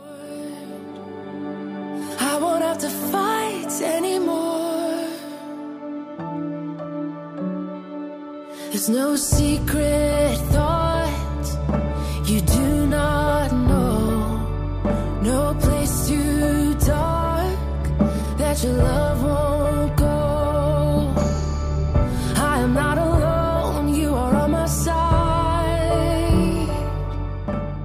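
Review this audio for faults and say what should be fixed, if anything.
No faults; nothing to fix.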